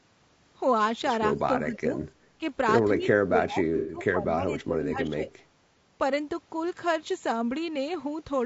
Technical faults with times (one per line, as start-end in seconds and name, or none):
0.00-8.46 low-delay AAC compression
1.38-1.42 echo leak
1.65-1.97 speech suppressed in double talk
2.98-5.29 speech suppressed in double talk
3.77-3.97 AAC frame loss with concealment